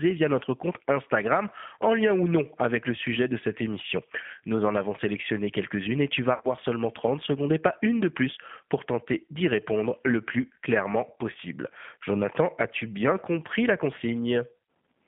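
A speech clip carried throughout by the G.729 codec: the band stops near 3.5 kHz with little below 150 Hz, and the roughness and slightly synthetic texture, unlike plain band-limiting, point to pulse-based reconstruction at about 8 kbit/s. After "et tu vas", from 6.34 to 6.47 s, VoIP packet loss concealed by the speech codec stretches the last sound into a buzzy tone or coloured noise that fades. Roughly 90 ms went missing over a 100 ms span, with the longest gap near 60 ms. The voice stays weak briefly after it returns, which separates this from a hard dropout or a click.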